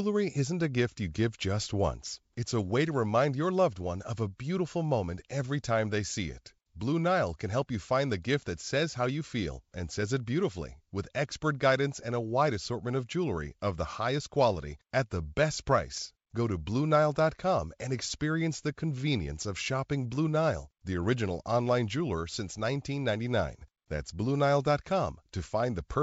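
No faults are audible in this speech clip; it carries G.722 wideband telephone coding at 64 kbit/s, which leaves at most a faint trace on the sound.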